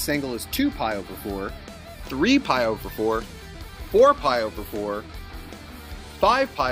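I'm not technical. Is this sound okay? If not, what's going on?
Yes, it's fine; nothing wrong can be heard.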